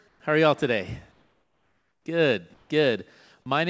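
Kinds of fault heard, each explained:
Comfort noise in place of the background: at 0.08–0.20, 1.12–2.06 (after "are y'all today") and 2.54–2.70 s, pauses turn flat, featureless and slightly quieter, likely from discontinuous transmission.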